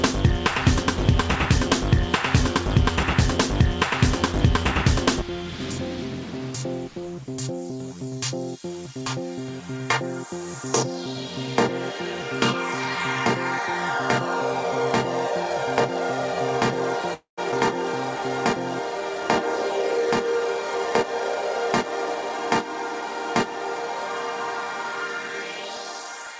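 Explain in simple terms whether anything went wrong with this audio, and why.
Three things went wrong, all close together in the second half.

From 17.14 to 17.40 s there is a call audio freeze. The sound stalls and trails off, and for part of that time it goes fully quiet. This is likely caused by data packets arriving late, so the receiver ran out of audio to play. It filled the wait with a fading stretch of about a quarter second. Nothing was lost. The sound simply resumes where it stopped, a little late.

Right after, at about 17.52 s, there is a skip ahead. Playback jumps forward almost without a gap. Roughly 70 ms of sound is gone, and the two sides are joined nearly directly. This takes back part of the delay the freeze added. The system dropped some waiting audio so it could catch up to real time.

From 21.03 to 22.30 s a jitter buffer speed-up happens. The sound plays about 8% faster but keeps its normal pitch. 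The receiver had built up more stored audio than it wanted. It trimmed many tiny slices, about a tenth of a second in total, to cut the delay. Over that stretch the sound can seem slightly rushed.

All of this passed through a call connection that carries nothing above 8 kHz, so the very top end is absent throughout.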